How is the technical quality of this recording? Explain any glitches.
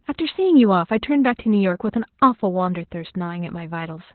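The quality's pretty rough, mainly from heavy Opus voice compression running through the whole clip. Nothing gets through above about 4.3 kHz, so the speech sounds muffled and phone-like. The SILK coder is in narrowband mode and coding the excitation coarsely, which fits a bitrate around 8 kbps, and that gives it a hoarse, slightly robotic edge.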